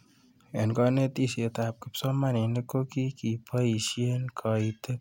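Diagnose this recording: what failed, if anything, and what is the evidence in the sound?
Nothing stood out on listening to this speech recording that would point to a failure at any stage.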